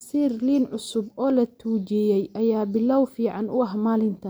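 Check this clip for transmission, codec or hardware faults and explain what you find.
No faults can be heard anywhere in this speech.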